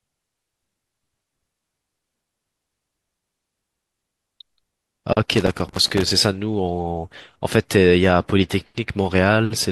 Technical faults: loose connector crackle

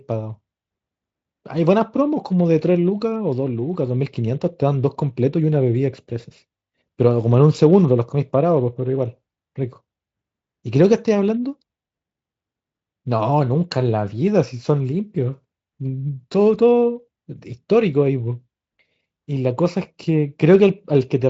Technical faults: none

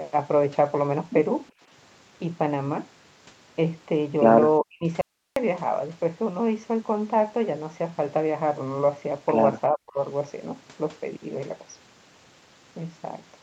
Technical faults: speech suppressed in double talk; audio dropout to a faint residue

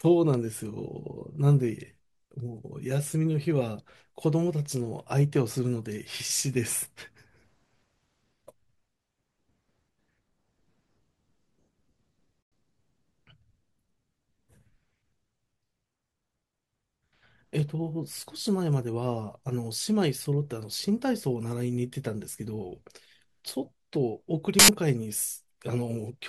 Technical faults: corrupt frame muted; corrupt FLAC frame

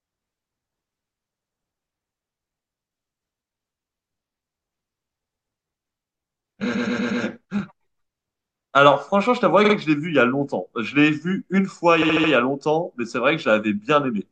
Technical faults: repeated frames

